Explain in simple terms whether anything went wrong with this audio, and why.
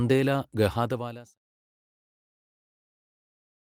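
Nothing went wrong here: the speech simply fades out smoothly from about half a second in, reaching silence at 1.39 s, the way an editor would lower the level, with no click or hard edge.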